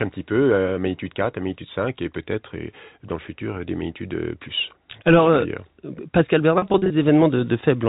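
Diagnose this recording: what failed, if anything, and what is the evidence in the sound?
Network: packet loss with pitch repetition, 6.58 to 6.90 s. Gaps of up to 40 ms are bridged by held, buzzy repeated pitch periods rather than silent dropouts or clicks.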